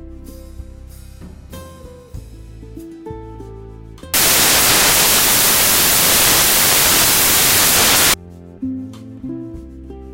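From 4.14 s to 8.14 s the audio turns into samples built from the wrong bytes. Each sample is being reassembled with its bytes misordered or offset, so the rapidly varying low-order bits land in the high-order position. The result is four seconds of loud, harsh broadband noise.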